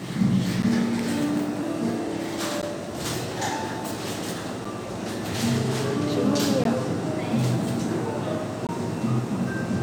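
Every two seconds or so the sound drops out into a short, hard-edged hole, at 0.62, 2.62, 4.65 and 6.64 s, and from 8.67 to 8.69 s. These are gaps between stream segments: the timestamps of consecutive 2-second segments don't quite butt up, so the player pads the space with silence. Each hole runs roughly 9 to 20 ms, nothing is actually missing, and the steady rhythm is the giveaway.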